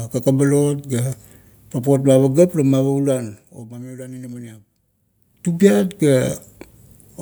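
From 5.16 to 5.57 s there is zipper noise. The level moves about 15 dB in unsmoothed 1 dB steps. Each step clicks, making a rapid ticking.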